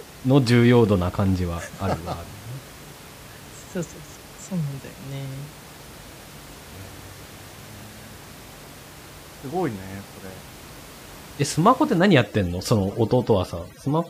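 From about 11.99 s to the end, overdone noise removal kicks in: the suppressor gates bands near its noise estimate, leaving the background lowered and broken into twinkly specks.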